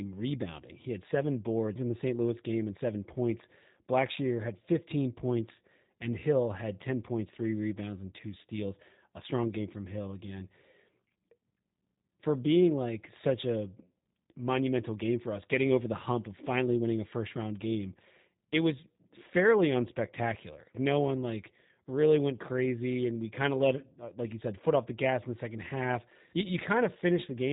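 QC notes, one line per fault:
throughout, G.729 codec: the speech passed through a low-rate speech codec, G.729 and consistent with an 8 kbit/s stream, rebuilding each short frame from a filter model and a few pulses, so nothing above about 3.8 kHz survives and the speech sounds plainly rough and synthetic.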